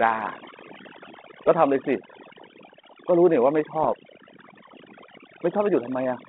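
From the start the speech carries overdone noise removal. The suppressor was set so aggressively that any frequency band sitting near its noise estimate is pulled almost to nothing, and the quieter parts of the voice are cut along with the noise. Between phrases the background drops to near silence flecked with small twinkling artefacts.

From 3.82 to 3.93 s there is a short cluster of bit errors on an ADPCM link, consistent with a low error rate of around a fifth of a percent. The line is G.726 at 32 kbit/s, band-limited to roughly 200 Hz to 3.5 kHz with light coding roughness. Each flipped bit also throws off the decoder's adaptive step size and predictor, so the damage rings on briefly as pops and a rough, gritty burst with quick jumps in level.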